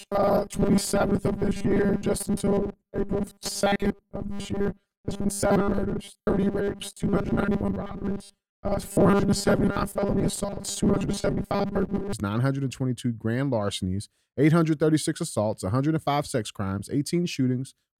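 From 0.01 s to 12.13 s, robotic sound from repeated short buffers turns the speech into a rigid metallic buzz at 200 Hz, likely from a 5 ms block replayed most of the time. Spectrograms show fixed harmonics at 200 Hz multiples; waveforms show identical repeating cycles.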